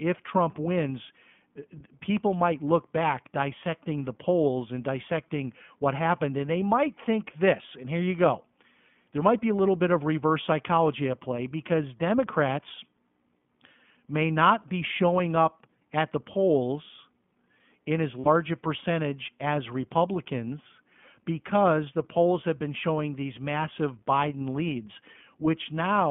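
Throughout, the speech passes through the iLBC codec, with the band held to roughly 150 Hz to 3.4 kHz. Each 20 ms frame's excitation is coded independently, leaving a plainly audible rough, slightly synthetic texture consistent with the 15.2 kbps mode.

From 18.20 to 18.28 s come lost iLBC frames: about 60 ms, which fits three missing packets. The decoder fills the gap by repeating the last pitch cycle mixed with noise, heard as a brief held, buzzy vowel, and the speech recovers immediately afterward.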